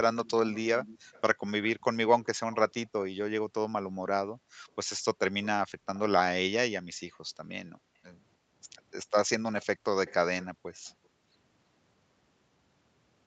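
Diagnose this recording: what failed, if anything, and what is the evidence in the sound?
Echo leak, at the call-processing stage: a delayed, lower-level copy of the speech trails the talker from 0.25 to 2.56 s, 5.43 to 6.00 s and 9.62 to 11.07 s. It lags by about 298 ms in the first two stretches and 323 ms in the third, sitting around 20 dB below the direct speech, then around 25 dB in the last. The likely cause is an echo canceller on a loudspeaker end passing residual pickup back. On a spectrogram, duplicate harmonic patterns appear shifted about 0.3 s to the right.

Background gated by the echo canceller, also in call processing: the room sound dips at 4.38 to 4.67 s by up to about 40 dB, within 6.92 to 8.51 s (around 400 ms affected in total) by up to about 24 dB, and at 11.00 to 11.32 s by up to about 18 dB. The canceller's suppressor clamped the microphone gain while the loudspeaker played, then released it. 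On the waveform, the noise floor shows notches. On the spectrogram, background energy vanishes across the band up to the 8 kHz ceiling of the Opus call path.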